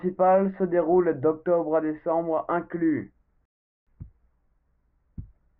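At 3.45 s the player's download buffer ran dry, causing a rebuffering stall: playback halted until more data arrived, resuming at 3.87 s. The speech drops into silence for about 0.41 s, then picks up exactly where it stopped, losing nothing but adding that time.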